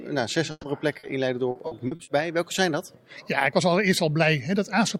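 From 0.51 to 0.66 s there's a burst of packet loss. About 120 ms never arrived, so the receiver stretched the last bit of sound into a held buzz or hiss that fades, drops to roughly 30 ms of silence, then jumps ahead with that 120 ms simply gone.

Around 0.99 to 1.06 s you get a short concealed packet loss. Roughly 40 ms went missing and the decoder papered over it by carrying the previous sound forward, then blending back in. It comes across as a quick smear or wobble rather than a clean dropout.

Then from 1.51 to 2.10 s it turns into repeated packet loss with that robotic sound. There are five separate holes, none longer than 40 ms but 200 ms in total, so about a third of that stretch is patched. Each patch is followed soon after by the next, which gives it the choppy quality.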